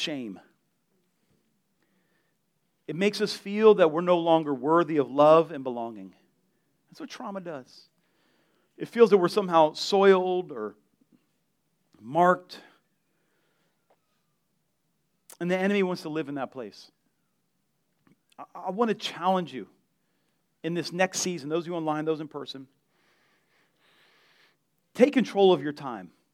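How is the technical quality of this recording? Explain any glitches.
Nothing in this speech recording jumps out as a glitch; it all comes across as steady and intact, with no technical hiccups to explain.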